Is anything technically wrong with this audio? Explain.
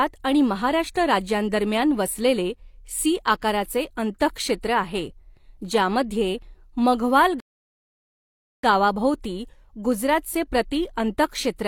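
Yes. From 7.40 to 8.64 s a rebuffering stall starves playback, inserting 1.23 s of silence as a flat waveform gap and blank spectrogram columns, before the speech resumes exactly where it stopped.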